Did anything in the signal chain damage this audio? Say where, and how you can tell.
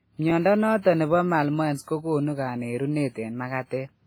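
Yes, two stages left marks on this speech clip.

Repeated buffer at 0.30 s, in the driver or buffer stage. A short slice of sound plays twice in a row with a hard join, giving a quick stutter or click. The repeated piece lasts about 11.6 ms, which fits a 512-sample buffer: fresh audio missed its deadline, so the device replayed the previous block once. That cost roughly 10 ms of real audio.

WMA compression throughout, at the codec stage. Across the whole clip the speech carries heavy codec damage: ringing and a washy smear around sounds, with hiss that rises and falls with the signal and thin, missing detail where weaker components were dropped. The likely cause is a transform coder using long blocks, which spreads quantisation noise over tens of milliseconds. The amount of damage points to a low bitrate, around 24 kbps.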